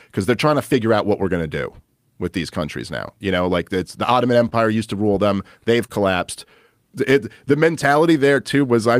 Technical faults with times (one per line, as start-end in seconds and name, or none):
0.00-9.00 clock drift between sender and receiver
0.22-8.68 repeated timing corrections
4.49-4.54 short stall from a late packet
5.86-5.90 short stall from a late packet